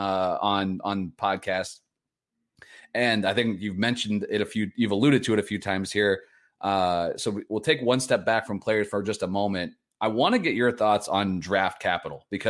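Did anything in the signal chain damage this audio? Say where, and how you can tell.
No, nothing in the chain seems to have touched this speech recording, and I can't hear any point where a stage left its mark on the sound.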